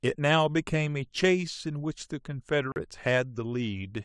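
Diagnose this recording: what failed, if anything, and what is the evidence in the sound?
The failure is in the driver or buffer stage. At 2.72 s the speech drops out completely for 40 ms, returning at 2.76 s. This is a block of digital silence: the level falls to silence rather than to background noise, and the waveform is cut and restored without any fade. A gap of exactly this shape fits an output buffer that was not filled in time, so zeros were played in place of the missing samples.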